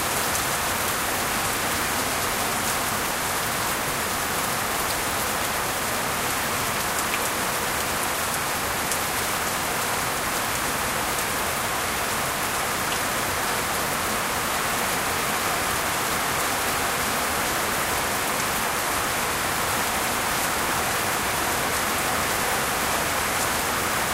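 The audio runs without any audible technical fault.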